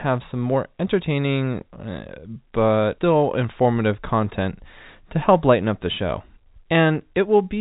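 Nothing goes wrong in the speech here; it carries the usual narrow telephone character of G.711 A-law coding, with nothing above 4 kHz, and at most a faint level-following hiss from that format.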